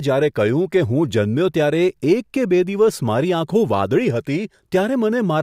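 No technical faults can be heard anywhere in the speech. Nothing in the recording needs a time marker or further comment.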